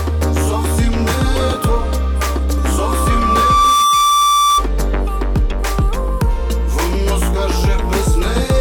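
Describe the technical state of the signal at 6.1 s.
At 6.1 s the signal is intact, with no audible dropout, distortion or other technical fault at that point.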